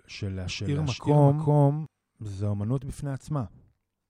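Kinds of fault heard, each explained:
Doubled audio track: the speech is likely being mixed in twice, with a second copy arriving over a slower capture path or held out of step by an edit. From 0.48 s to 1.86 s a full-band duplicate trails the original by around 400 ms at roughly the same loudness. Each syllable is repeated as a clean, dry echo with no decay or room colour, and the copy cuts in and out abruptly at those points.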